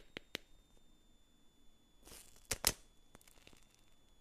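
Throughout, a switching supply whistle: a power converter running in audible burst mode or beating with another one sits around 3.4 to 3.8 kHz, roughly 30 dB below the sound, appearing as a thin horizontal line on a spectrogram.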